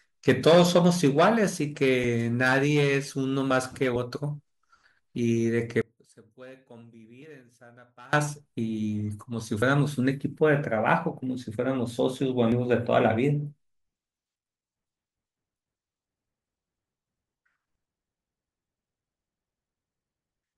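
Speech recording with two kinds of technical fault. At 2.04, 3.96, 7.22, 9.62 and 12.52 s there is an abrupt jump forward in the speech and no gap of silence. This is most likely a dropped buffer (overrun): audio was discarded before the software read it, and the surrounding material was spliced together directly. The skips are roughly 70, 40, 20, 40 and 70 ms, so the longer ones at 2.04 and 12.52 s can clip off part of a syllable. From 5.82 to 8.13 s, the mono sum of the speech falls by about 27 dB and only a faint residue remains. This points to one channel inverted, which is likely a polarity reversal on one side of the stereo pair. The centred voice is nearly identical in both channels, so it cancels when they are summed, and only their small differences are left. The 7.22 s skip falls inside this cancelled stretch.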